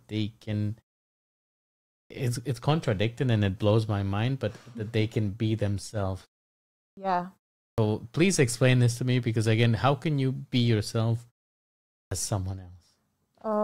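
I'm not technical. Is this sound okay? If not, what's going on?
No. This is a clipped start after a pause. The playback device dozes off during silence and wakes slightly late. The first 40 to 44 ms of sound gets cut off, so speech jumps in abruptly at 2.06 s ("it's contradicting and it"), 6.93 s, 7.74 s ("please explain this to") and 12.07 s.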